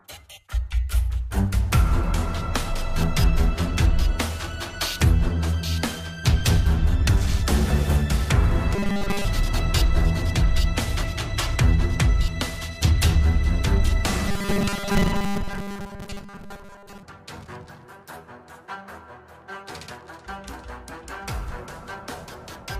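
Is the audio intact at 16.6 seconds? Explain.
No. At 16.6 s the audio falls within a robotic sound from repeated short buffers, lasting from 14.29 to 17.03 s. The likely cause is audio arriving too slowly, so a 5 ms segment is looped over most of the sound, imposing a rigid, metallic 200 Hz buzz.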